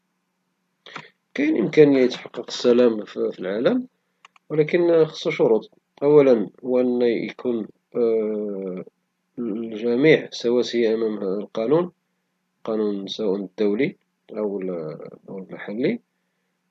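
No technical faults can be heard anywhere in the recording; the signal stays steady and intact throughout.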